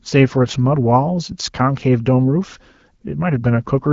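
No technical faults are audible.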